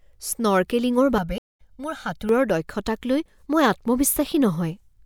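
Channel delay (comb filtering) runs from 1.18 to 2.29 s, ending just before "দক্ষতাকলৈ মই". One channel lags the other by roughly 1.5 ms, and when both are summed to mono, cancellations fall at evenly spaced frequencies starting around 400 Hz, leaving the speech hollow and phasey.

A stream reconnect interrupts it at 1.38 s, when the connection drops and the audio goes silent for 208 ms. Playback returns at 1.61 s with a fresh decoder, picking up roughly a tenth of a second later in the speech, so a short stretch is skipped.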